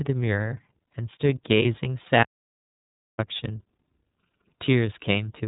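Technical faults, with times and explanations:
Throughout: iLBC codec, narrowband coding leaves nothing above 3.8 kHz, a hard spectrogram ceiling; the sound is clear but rough and synthetic, consistent with 30 ms frames at about 13.3 kbps.
2.23 to 3.19 s: audio dropout to silence, the sound cuts off for about 0.95 s of silence, a flat waveform line and empty spectrogram column, likely from lost input.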